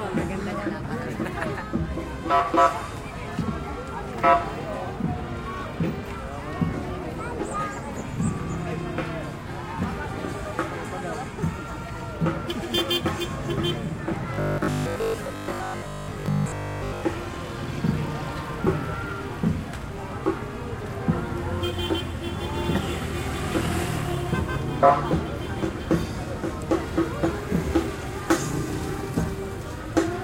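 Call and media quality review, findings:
Robotic sound from repeated short buffers, 14.34–17.06 s: audio likely arriving too seldom, last 20 ms replayed over most missing input, imposing a rigid 50 Hz metallic buzz.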